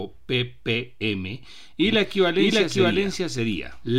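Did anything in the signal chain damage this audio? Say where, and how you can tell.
Yes. From 1.86 s to the end of the speech, a second copy of the same audio is mixed in, probably because a slower parallel capture path or an edit left two copies out of step. The doubled audio track trails the original by around 0.7 s at roughly equal loudness, full-band and dry. It has none of the decay or room colour an echo would have, and it cuts in abruptly at 1.86 s.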